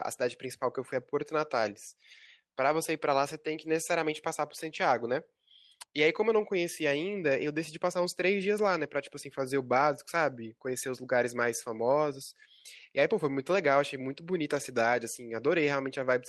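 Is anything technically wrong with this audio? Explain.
Yes. Lost packets rebuilt from error correction occur at 1.37–1.43, 8.63–8.69, 10.69–10.75, 13.19 and 14.09–14.11 s. Low-bitrate backup copies fill each gap, so the speech turns briefly rough and noisy. On a spectrogram these show as grainy patches, with no flat dropout in the waveform.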